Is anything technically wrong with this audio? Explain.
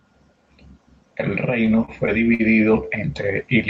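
Yes. From 1.46 s to the end, automatic gain is rising: the gain control judged the input too quiet and kept lifting its gain, so the speech and the background swell together gradually over the final two seconds rather than jumping at once.

Between 1.65 s and 2.41 s there are repeated stalls (stutter): packets arrived late five times, the jitter buffer ran dry, and the receiver stretched the last sound to cover about 110 ms in total, the longest wait about 51 ms. Nothing is lost, but the speech drags and stutters there.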